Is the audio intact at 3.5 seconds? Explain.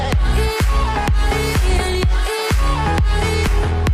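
No. At 3.47 s the playback hits a case of compressed frames skipped: about two whole frames of the coded stream, each 32 ms long, were never decoded, so the sound jumps ahead by roughly 70 ms. That distinguishes it from a dropout, which leaves silence.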